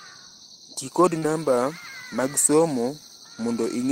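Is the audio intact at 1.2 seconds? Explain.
No: from 1.18 to 1.25 s the speech briefly smears, a short concealed packet loss where about 40 ms never arrived and the decoder extended the preceding sound to cover it.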